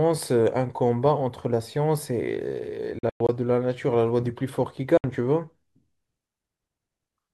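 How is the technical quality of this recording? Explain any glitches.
The speech has two bursts of silence. From 2.99 to 3.29 s the audio breaks up into several short holes totalling about 171 ms, the longest about 107 ms. At 4.97 s about 64 ms of audio cuts out, ending at 5.04 s. These are likely Bluetooth dropouts: packets arriving late at the headphones were discarded, so playback fell silent and resumed further along, skipping the missing stretch rather than pausing.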